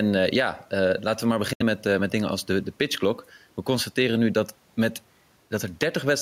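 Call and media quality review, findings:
Gain pumping throughout, a swing of around 5 dB. Likely an over-driven mic gain with a fast limiter. Unlike a noise gate, it does not cut the bed out.

Bluetooth dropout, 1.53–1.62 s: silence, then speech resumes at "met met dingen als" as if it had played on. Unlike concealment, nothing is smeared or repeated. Likely late packets on the headphone link, fitting about three lost frames.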